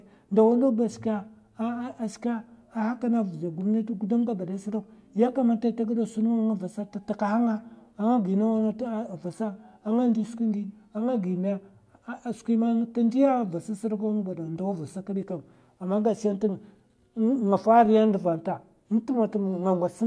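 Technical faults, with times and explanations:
No technical faults turn up anywhere in the speech recording; the signal path holds steady and continuous for its entire run.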